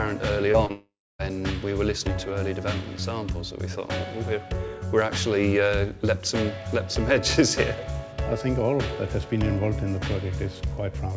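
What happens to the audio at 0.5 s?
A brief smear breaks the sound from 0.52 to 0.56 s. This is short concealed packet loss: about 20 ms of audio never arrived in time, so the receiver extended the preceding sound to fill the gap, then blended back into the real signal.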